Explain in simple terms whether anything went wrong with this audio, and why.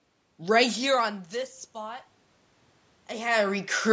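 The call's automatic gain rising kicked in between 0.38 and 2.07 seconds. Just as the talker moved back from the microphone around half a second in, the level reaching the microphone fell sharply, so the gain control slowly turned itself up to compensate. Over that stretch of about 1.7 seconds, the voice and the room noise behind it swell together, and the background becomes more noticeable along with the speech.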